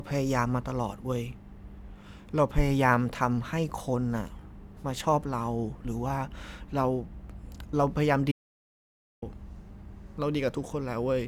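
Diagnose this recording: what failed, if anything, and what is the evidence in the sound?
The speech cuts out dead at 8.32 s and comes back abruptly at 9.22 s, so you lose about 0.91 s. That gap is an audio dropout to silence: plain silence, with no room tone or noise floor underneath. That pattern points to the input side rather than the codec or playback. The capture feed was likely interrupted by a dropped device, a failed link or a stray mute, and the recorder kept writing silence until the signal returned.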